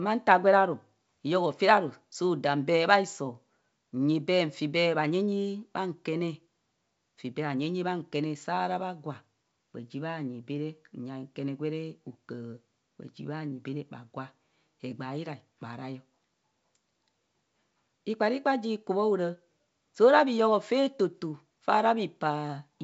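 No faults detected: the speech runs over G.722 wideband coding at 64 kbit/s, bandwidth reaching about 7 kHz, with at most a faint trace of the coding.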